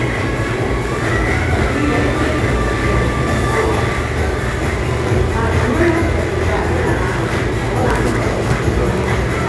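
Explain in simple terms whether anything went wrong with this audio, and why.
Something did go wrong here, and it runs the whole way through: aliasing. The audio was squeezed down to a lower sample rate, which fits a drop from about 48 kHz to 22 kHz, without first trimming off the highs. Anything above roughly 11 kHz had nowhere to go, so it folded back down as false, unrelated tones. The bright, hissy parts of the sound come out gritty and a bit metallic instead of clean.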